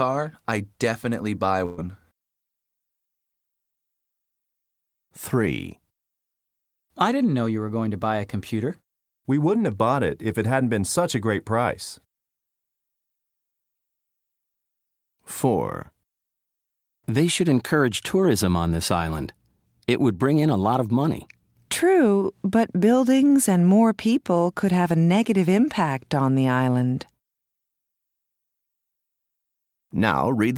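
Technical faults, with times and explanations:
1.65–1.79 s, burst of packet loss: the sound briefly stops moving forward, holding on as a sustained buzz or hiss that fades over roughly 120 ms, then jumps ahead with that stretch gone. A short run of packets went missing or arrived too late to play. The receiver concealed the hole by extending the last good audio and lowering its level, and when packets arrived again playback skipped past the lost span.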